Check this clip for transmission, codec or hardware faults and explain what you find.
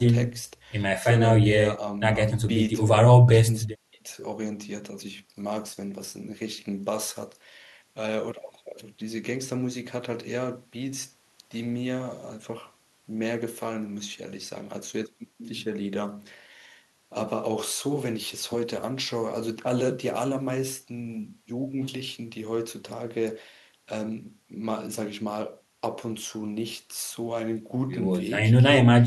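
Nothing found on listening: the speech holds steady with no audible transmission, codec or hardware trouble.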